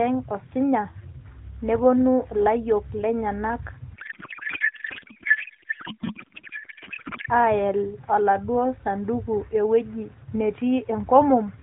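From 3.94 to 7.30 s, a codec payload misread replaces the speech with garbled noise and warble that barely tracks it. The decoder is reading octet-aligned AMR frames as bandwidth-efficient, so every field lands in the wrong place. Outside that stretch, the narrowband AMR sound fits about 12.2 kbps.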